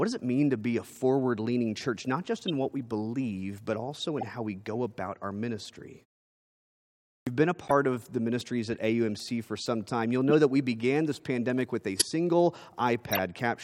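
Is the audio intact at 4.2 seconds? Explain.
No, there's a corrupt frame decoded from 4.19 to 4.23 s: a few bit-damaged frames played anyway, spraying misplaced energy into a brief burst peaking around -20 dBFS.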